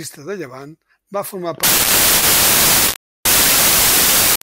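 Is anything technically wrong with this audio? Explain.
Yes. From 1.63 s to the end of the speech, the samples are built from the wrong bytes: misaligned or swapped bytes promote noisy low bits, producing loud, harsh noise close to white on the louder sounds.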